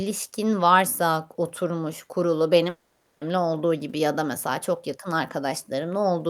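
Just after "varsa k oturmuş kurulu", from 2.69 to 3.23 s, the speech gives way to a smeared, buzzy continuation of the last sound for about half a second before resuming at "olduğu gibi ya da". This is likely a long network dropout, with the missing audio concealed rather than recovered.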